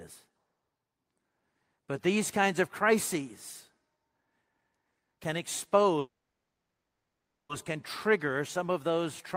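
A speech clip in which the sound stalls from 5.99 s to 7.51 s: the last bit of audio smears into a brief fading buzz, then about 1.4 s of silence, before speech resumes at "can trigger some of" with nothing skipped. That is a call audio freeze, likely caused by packets being held up in transit so the jitter buffer ran dry. The receiver filled roughly 1.5 s, and everything after arrives about 1.5 s later than it should.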